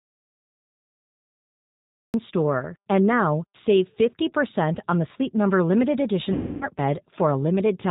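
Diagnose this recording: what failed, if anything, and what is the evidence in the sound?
G.729 codec damage runs throughout, at 8 kbit/s. The speech sounds rough and synthetic, and the spectrogram stops sharply at 4 kHz, with empty bands above.

An audio dropout to silence is already under way at the start and lasts until 2.14 s, likely from a lost input or mute. The waveform is flat, with no room tone.

VoIP packet loss concealed by the speech codec appears at 6.33 to 6.68 s. About 280 ms is lost, which fits fourteen 20 ms packets. The spectrogram shows the sound stretched into a buzzy tone or coloured noise that fades.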